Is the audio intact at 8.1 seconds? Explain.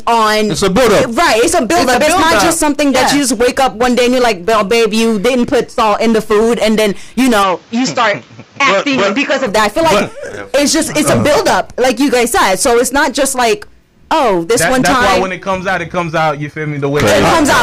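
No. From 7.43 to 9.47 s the sound turns duller, with nothing above 7.6 kHz and a faint new noise floor, likely from the input switching to a poorer device.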